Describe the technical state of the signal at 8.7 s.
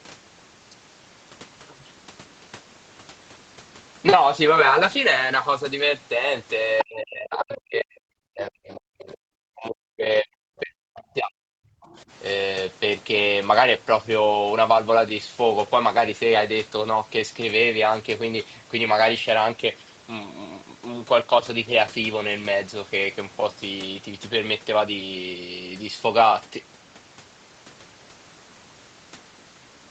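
At 8.7 s the talker is caught in speech suppressed in double talk, running from 8.29 to 11.84 s. The likely cause is the echo canceller meeting both sides at once and turning everything down, so the voice drops by as much as about 40 dB across roughly three seconds. Unlike a network dropout, it dips and thins in pieces rather than going cleanly silent.

Overlapping this, from 8.68 to 8.8 s, there is a brief scrap of the other side's voice leaking through, about 25 dB below the talker. It is likely residual loudspeaker echo that the canceller missed. It is a separate second voice, not a smeared copy of the talker's own sound.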